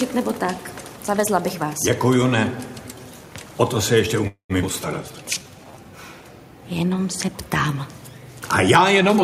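From 4.27 to 4.53 s there is a call audio freeze. The sound stalls into a fading buzz or hiss, then about 110 ms of silence. Delayed packets likely emptied the jitter buffer.

At 4.62 s the audio skips ahead. Roughly a tenth of a second is dropped, and the two sides join almost directly.

From 5.09 to 5.80 s comes a jitter buffer slow-down. Repeated pitch periods add 113 ms, so playback runs at 85% speed, drawn out at the same pitch.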